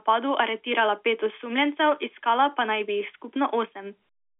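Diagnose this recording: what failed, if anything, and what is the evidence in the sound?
Nothing failed here: this is just ordinary G.711 telephone coding doing its job, with the speech held to the usual line band of 300 Hz to 3.5 kHz and nothing getting through above 3.7 kHz, which is how a fixed-line call is supposed to sound.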